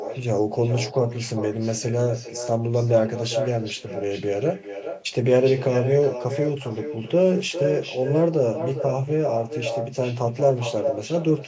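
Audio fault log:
throughout, echo with no canceller: each phrase returns roughly 0.4 s later, about 8 dB down and thinner, as the far-end loudspeaker leaks uncancelled into its microphone.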